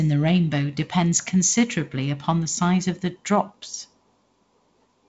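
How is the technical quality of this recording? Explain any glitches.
There are no glitches to explain: the speech arrives as a G.722 wideband telephone signal at 48 kbit/s, with nothing above 7.7 kHz and the light hiss and slight graininess that this coding leaves in the sound.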